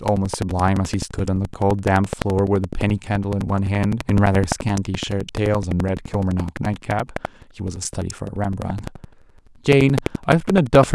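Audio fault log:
Throughout, buffer tearing: a robotic 11.7 Hz rattle rides on the speech, fitting a 2048-sample buffer where a small slice of each buffer replays audio about 300 ms old.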